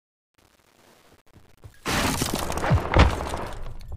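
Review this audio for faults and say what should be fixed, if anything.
A digital gain stage on the opening fade-in kept too few bits and applied no dither, which fits a path running at only 9 bits. The result is truncation distortion on the fade from 0.0 to 2.4 s, worst between 0.0 and 2.09 s. While the level is low, the waveform collapses into a handful of square steps, so the rising sound comes through gritty until the fade-in finishes at 2.4 s.

To prevent it, apply fades at full internal resolution and add dither whenever the word length is reduced.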